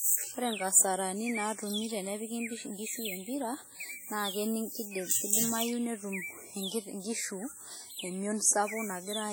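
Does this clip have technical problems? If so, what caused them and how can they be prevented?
Yes. Throughout the speech there is heavy transform-codec damage, likely from WMA compression at a very low bitrate, which fits roughly 32 kbps. Quantisation noise is smeared over long blocks, so each syllable rings and washes, and a hiss swells and fades with the level while weak spectral lines drop out. Unlike room reverb, the smear is metallic and gated to the signal. Unlike a band-limited MP3, content still reaches about 20.1 kHz. To prevent it, encode at a much higher bitrate or use a lossless format.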